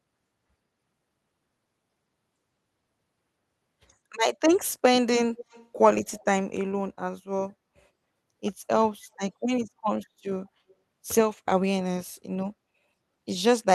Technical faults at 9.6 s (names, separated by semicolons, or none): none